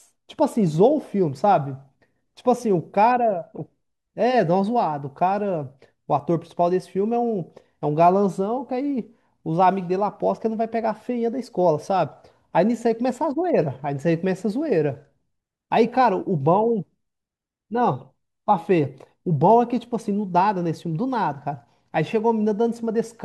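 No technical faults turn up anywhere in this speech recording.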